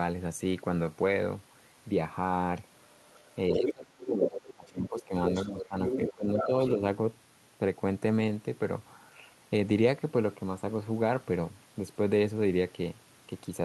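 From 2.76 to 3.72 s, and again from 4.23 to 6.68 s, the other side's voice is leaking through, likely echo the canceller left behind. It sits only about 5 dB below the talker and shows as a second set of harmonic striations on the spectrogram.

Across 3.52 to 5.12 s, 5.45 to 5.76 s and 6.13 to 6.8 s, speech is suppressed in double talk. The talker dips by roughly 25, 10 and 15 dB, which appears as waveform notches and darkened upper bands.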